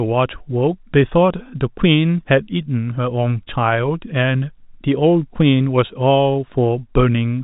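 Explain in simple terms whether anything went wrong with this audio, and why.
Nothing went wrong anywhere in this speech recording.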